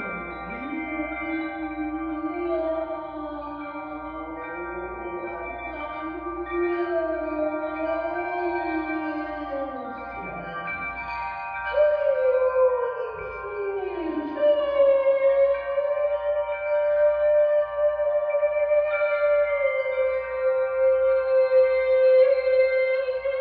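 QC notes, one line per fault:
Nothing to flag here, so there's nothing to log for this one.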